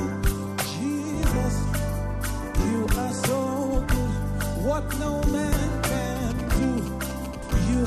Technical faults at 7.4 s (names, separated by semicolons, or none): GSM signalling bursts; compressed frames skipped